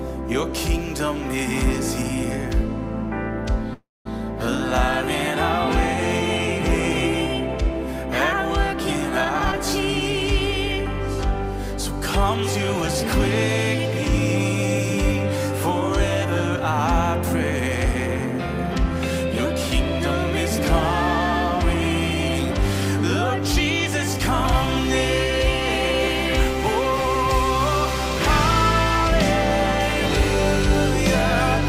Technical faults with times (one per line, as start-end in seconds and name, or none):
3.73-4.07 call audio freeze
9.25-9.58 jitter buffer speed-up